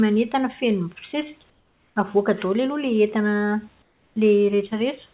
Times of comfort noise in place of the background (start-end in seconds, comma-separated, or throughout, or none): 1.50-1.96, 3.82-4.16